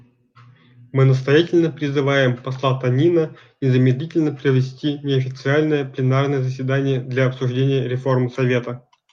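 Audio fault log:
No fault is heard anywhere in the speech.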